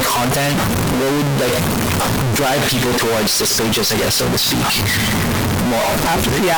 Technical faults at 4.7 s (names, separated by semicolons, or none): stuck bit